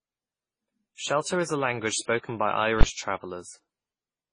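Right from the start, the speech has that smeared, double-processed texture you get from transcoding between lossy codecs. There's nothing above 10 kHz, and the warbly, swirly artefacts sound layered rather than from a single pass. The likely story is an MP3 encode that was then re-encoded to AAC-LC, with the second codec wasting its limited bits on the first one's mess. Both sound like quite low bitrates, somewhere around 24 kbit/s.

Then, from 2.81 to 2.83 s, there's a sharp bang: invalid numbers at full scale. Some calculation produced infinite or invalid values, and those got pinned to the largest positive or negative sample value for a roughly 20 ms block. With a block that short, you don't hear separate pops at each edge with a gap between them. It just lands as a single very loud crack.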